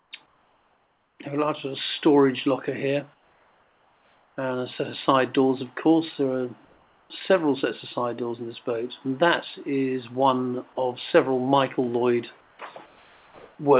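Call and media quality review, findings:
Comfort noise in place of the background at 0.00–0.11, 0.26–1.19, 3.14–4.37, 6.65–7.10, 12.41–12.59 and 12.86–13.58 s. The quiet background turns into smooth, featureless hiss about 1–4 dB lower, likely from discontinuous transmission with receiver-side comfort noise. On a spectrogram, the textured floor becomes uniform haze, with a small level step at each gap edge. The whole clip also stops at 4 kHz, consistent with a G.711 call codec.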